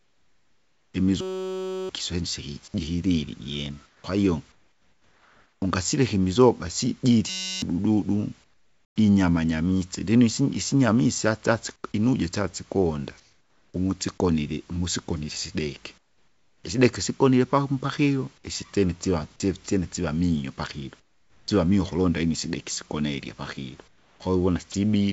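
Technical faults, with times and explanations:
0.00–0.94, 3.86–5.62 (ending just before "ungasileka imizoga sijili"), 8.44–8.96, 11.76–13.74, 15.98–16.64, 21.00–21.48 (between "siva miyo pakilo" and "mio ukulonda inyu sideki"), 23.88–24.74 s: comfort noise in place of the background. In these pauses the natural room noise gives way to a smooth, steady hiss, about 10 to 14 dB quieter where measurable. The likely cause is discontinuous transmission: the sender stops sending during silence, and the receiver fills the gap with synthesized noise. A spectrogram shows a flat, textureless band with nothing above 8 kHz, and the waveform shows an even, low envelope.
1.21–1.89 and 7.30–7.62 s (the second just after "ungasileka imizoga sijili"): system hang loop. A 5.33 ms slice repeats exactly, giving a steady 188 Hz buzz in place of roughly 0.7 s and 0.3 s of audio. The loop length fits a stalled 256-sample ring buffer. 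The spectrogram shows a rigid comb of 188 Hz harmonics, and the waveform shows identical repeating cycles.
24.72 s: sound dropped by the voice detector. A 20 ms fragment of sound at the close of the last pause is swallowed and replaced by the same steady hiss, likely because the voice detector classed it as background. It appears as a tiny gap where the waveform's onset energy should be.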